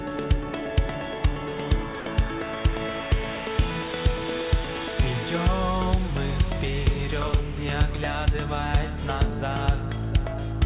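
At 2.00 s, sound dropped by the voice detector: sending likely paused, so 60 ms of audio gives way to steady comfort noise before it returns.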